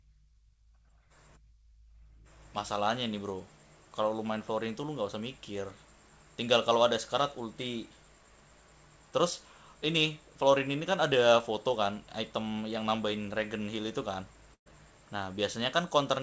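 At 14.54 s the speech breaks up in a burst of packet loss that lasts until 14.68 s. Several packets in a row never arrived in time. The receiver filled about 118 ms by stretching the last sound it had, turning it down as it went, and the gap fades into near silence for about 80 ms. When the speech resumes, roughly 120 ms of it has been skipped. The call path's G.722 coding keeps nothing above 8 kHz.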